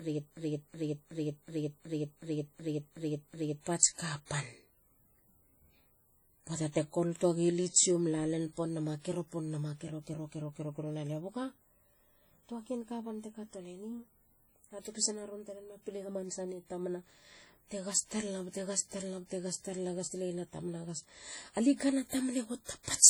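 A broken-record loop runs from the start of the clip to 3.67 s. A fragment of about 0.37 s repeats back to back, already under way when the audio begins and heard nine times, likely because playback or the stream stalled and kept resending its last buffered piece. The speech that belonged in those seconds is lost.

WMA compression damage is heavy throughout, likely from a Windows Media Audio encode at a low rate, consistent with about 32 kbps. Long transform blocks smear quantisation noise, giving a ringing, washy quality and a hiss that swells and fades with the speech.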